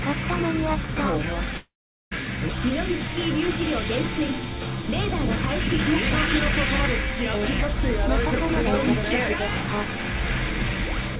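From 1.57 to 2.13 s, the sound breaks off. The last moment is stretched into a fading buzz, then about 0.4 s of silence follows. This is likely a long network dropout. Roughly half a second never arrives, and the audio resumes without it, still band-limited to 4 kHz by the call codec.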